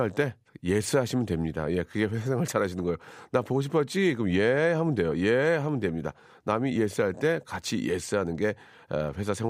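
No technical faults are audible.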